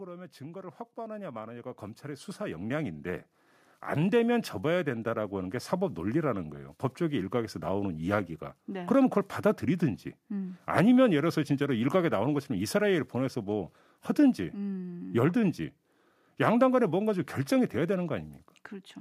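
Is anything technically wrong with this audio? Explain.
Yes. From 0.38 to 8.09 s there is automatic gain rising. The gain control judged the speech input too quiet and raised its gain slowly, by about 16 dB. Voice and background noise swell together over those seconds, so the room grows louder along with the speech.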